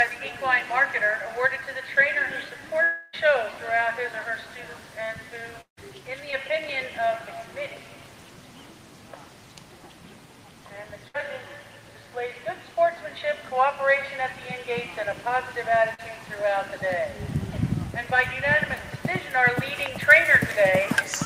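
From 2.83 to 3.15 s, then 5.61 to 5.79 s, the sound stalls into a fading buzz or hiss and, the second time, about 120 ms of silence. Roughly 300 ms and 160 ms are skipped, likely a long network dropout. At 6.31 to 6.34 s and 15.94 to 16.00 s, short concealed packet loss, where 20 ms and 40 ms gaps filled by extrapolation, leaves brief smears. A burst of packet loss at 11.08 to 11.16 s drops 60 ms, heard as a held, decaying tail before resumption.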